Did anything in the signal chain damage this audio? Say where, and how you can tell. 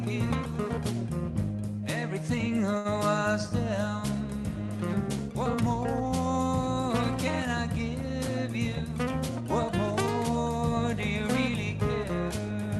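Yes. At the network and jitter-buffer stage, a short stall from a late packet occurs at 2.77–2.88 s. The buffer ran empty, so the receiver stretched the last sound by 73 ms until the packet arrived. On a spectrogram it appears as a smeared, held band, and the waveform shows a slightly dipping sustain.

From 8.58 to 9.74 s, a jitter buffer speed-up drains that extra delay. Short pitch-period slices, roughly 70 ms in all, are cut out, so playback runs at 104% speed with unchanged pitch. The waveform loses cycles at intervals, while spectrogram harmonics stay level and events arrive sooner.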